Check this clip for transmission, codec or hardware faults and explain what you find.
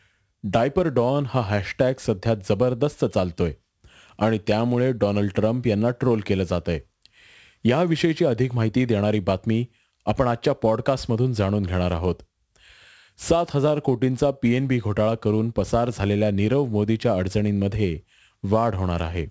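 One fault runs through the whole clip: aliasing. The speech has been resampled down without a proper anti-aliasing filter. The band edge sits at 8 kHz, which fits a drop from 44.1 kHz to 16 kHz. Energy that lay above 8 kHz was not removed. It folded back below the edge onto unrelated frequencies. The folded energy is around 30 dB below the speech. Sibilants sound gritty and metallic, and the spectrum stays full right up to 8 kHz.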